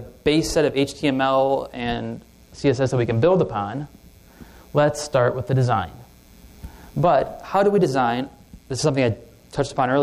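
From 1.73 to 3.91 s, and from 8.22 s to the end, a Bluetooth SBC bit pool drop occurs. Fewer bits starve the top sub-bands. Treble dulls and grit rises, which fits a bit pool falling from 31 to 13.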